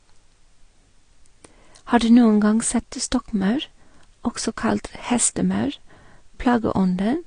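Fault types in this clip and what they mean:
Transcoding between lossy codecs: The speech has nothing above about 9.8 kHz for the whole clip, so it sounds dull and slightly muffled. Two layers of coding damage sit on top of each other. Smeared, swirly consonants fit a low-rate AAC-style stage, and a second grainy texture fits a later Vorbis pass. The later codec spent its bits re-coding the first one's artefacts. This is likely a chain of two lossy encodes, and the lowest cut-off remained.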